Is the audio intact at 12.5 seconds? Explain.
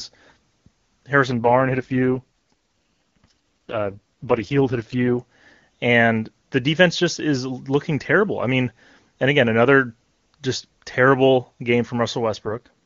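No. An AMR rate drop runs from 12.45 to 12.71 s: the radio link weakens and the network switches the AMR-WB codec down from its top mode, spending bits on error protection instead of the speech. The roughness points to the lowest mode, around 6.6 kbit/s. For that quarter second the speech turns rough, raspy and synthetic, yet the bandwidth stays the same and nothing drops out.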